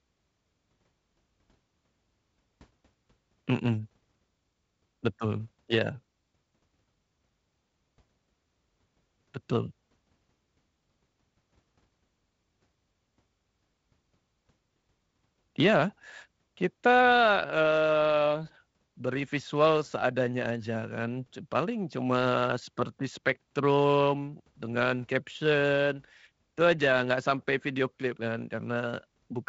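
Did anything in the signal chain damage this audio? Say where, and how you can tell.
No, nothing in the chain damaged this speech; it just sounds like a wideband phone call carried over G.722, with the top end stopping around 7.7 kHz and a faint hiss up high, and the slightly grainier lower band fits the 48 kbit/s mode.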